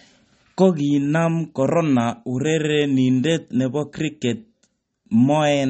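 From start to finish, the speech has a hard ceiling at 8.4 kHz, with nothing above it, and plainly audible codec damage. This is likely MP3 compression at a low bitrate, and the damage points to roughly 32 kbps. With so few bits, the encoder cuts the treble at a fixed frequency and drops weaker spectral detail, which switches in and out between frames and leaves the speech dull and watery.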